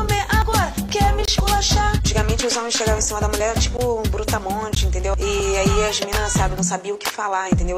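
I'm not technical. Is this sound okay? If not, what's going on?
No. Two different faults break up the sound.

The first is an overlap between stream segments. The audio arrives in one-second pieces, and at four points two pieces claimed the same moment. The player trimmed the supposed duplicate, but that sound existed only once, so a sliver disappeared: at 0.42–0.45, 2.39–2.43, 5.40–5.43 and 6.36–6.39 seconds, each 23 to 36 milliseconds long. You hear a small click or skip as the sound jumps ahead.

The second is a block of digital silence. Three times, probably because the program failed to deliver audio quickly enough, a chunk was filled with silence instead. At 1.25–1.28 seconds the hole lasts about 23 milliseconds, which fits a 1024-sample buffer. At 3.77 and 4.75 seconds it lasts about 15 milliseconds. The sound drops out and returns instantly.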